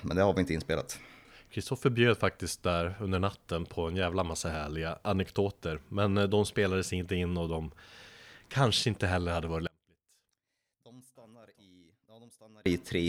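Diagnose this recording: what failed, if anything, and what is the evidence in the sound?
From 9.67 to 12.66 s the speech collapses by about 32 dB into a faint residue, as if the centre has been hollowed out. One channel inverted is the likely cause, probably a polarity swap in the wiring: the two sides, nearly identical, cancel when summed to mono.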